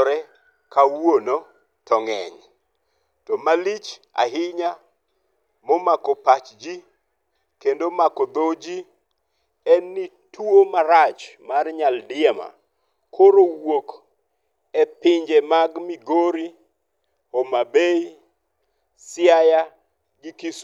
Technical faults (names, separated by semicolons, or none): none